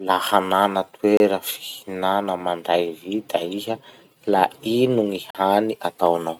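The speech drops to silence for 28 ms at 1.17 s and 43 ms at 5.31 s, then resumes: a Bluetooth stall, likely the headphone buffer running dry during interference.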